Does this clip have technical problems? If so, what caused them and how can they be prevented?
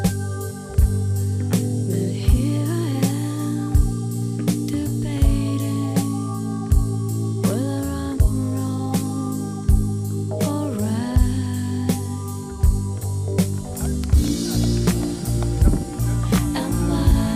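Yes. A block size mismatch (truncated) runs throughout, producing a steady 46.9 Hz buzz: the end of each written block, which fits 1024 samples, is discarded, leaving a discontinuity every 21 ms. The waveform shows a regular seam there, and the spectrogram shows fine vertical striping with buzz harmonics. Pacing sounds unchanged. Prevention: make every stage read exactly the block size the previous stage writes.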